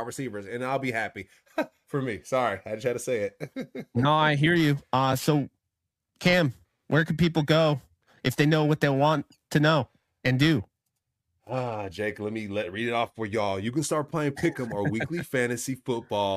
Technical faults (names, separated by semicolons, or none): periodic clock jitter